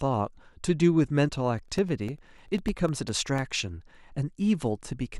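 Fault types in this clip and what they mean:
Periodic USB or driver dropouts: from 1.58 to 3.39 s, roughly a millisecond of speech drops to silence every 0.1 s, ticking evenly, unlike random clicks from interference.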